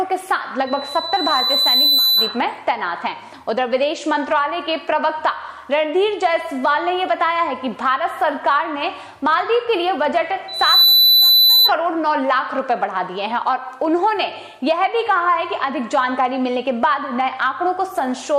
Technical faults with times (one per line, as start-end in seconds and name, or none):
0.66-2.40 loudspeaker feedback squeal
10.48-11.72 loudspeaker feedback squeal